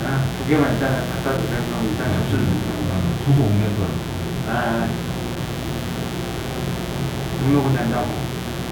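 A mains buzz runs under the everyday sound from start to finish. It sits high, only about 10 dB below the sound itself. Sharp switching spikes from a dimmer, rectifier or unshielded cable ride in on the supply. They come twice per cycle of the 60 Hz mains. Their harmonics climb into the kilohertz range. The result is a steady, raspy buzz rather than a smooth hum.

Periodic USB or driver dropouts begin at 0.37 s. They recur every 1.0 s up to 8.36 s, about ten in all. Each time, roughly 2 ms of audio is lost and replaced by silence. That pattern fits a background task blocking the USB bus or audio driver on a fixed schedule. Each gap lands as a regular tick or pop once a second.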